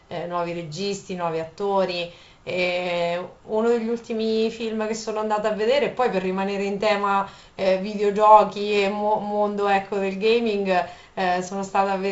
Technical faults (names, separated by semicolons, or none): none